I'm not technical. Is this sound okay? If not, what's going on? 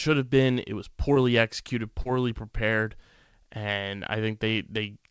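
No. There is short concealed packet loss at 1.14 to 1.17 s and 2.01 to 2.07 s, just before "prepared and". Bits of the call arrived too late, and the receiver covered each gap by continuing the sound just before it. The result is a brief smear or wobble rather than the silent hole of a plain dropout.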